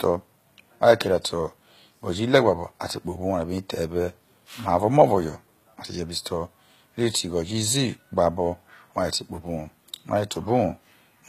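Throughout the speech, the treble has a gritty, lispy, metallic edge, most likely from HE-AAC compression at around 20 kbps, which rebuilds upper bands from copied lower ones. A spectrogram shows blocky, repeated high-frequency patches and nothing above 14.9 kHz.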